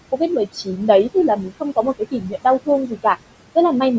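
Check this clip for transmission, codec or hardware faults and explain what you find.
The clip has two faults, both from a call's noise suppressor: steady suppression artifacts and three places where speech itself was pulled down.

Noise suppressor artifacts run through the whole clip. The suppressor judges, frame by frame, which frequency bands hold steady noise and lowers them, here by about 21 dB. The room noise, which sits about 14 dB below the speech, therefore drops away in the gaps and comes back underneath each phrase.

Speech cut by the noise suppressor occurs at 0.45–0.89 s, 1.14–2.45 s and 2.87–3.05 s. The suppressor mistook parts of the speech for background noise and attenuated them with it, by up to about 14 dB, 21 dB and 15 dB respectively. Only brief portions within each span are hit, a few hundred milliseconds in the longest one. The affected parts of the speech there sound swallowed or faded. 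The call's microphone band, which stops at 8 kHz, plays no part in this.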